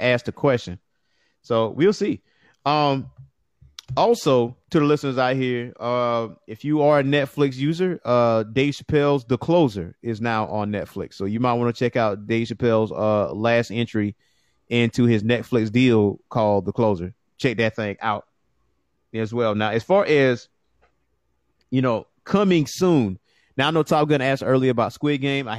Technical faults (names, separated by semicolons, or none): none